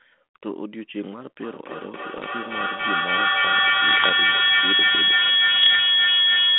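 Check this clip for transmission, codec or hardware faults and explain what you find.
Two faults are present: a feedback howl that takes over from 1.4 s to the end, and three short bursts of bit errors on an ADPCM link.

Feedback howl: From 1.4 s onward, sound leaving a loudspeaker is picked up again by a microphone on the same call. Each trip round the loop adds level, so the repeats grow and collapse onto a tone near 3 kHz instead of dying away. The tone peaks at about 16 dB above the speech, and the loop's round-trip delay is roughly 0.3 s. A spectrogram shows a bright horizontal line near 3 kHz, and the waveform envelope swells well above the speech.

Bit errors on an ADPCM link: These occur at 2.17 to 2.24 s, 3.88 to 4.11 s and 5.56 to 5.76 s, with error rates of about 0.7 to 1 percent. On a 150 to 3400 Hz G.726 link, a flipped bit corrupts more than one sample, because it also throws off the decoder's step size and predictor, and the damage rings on for a few milliseconds. 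Each burst sounds like pops and gritty roughness with brief jumps in level. The waveform shows spiky excursions, and the spectrogram shows short vertical smears of broadband energy across the telephone band.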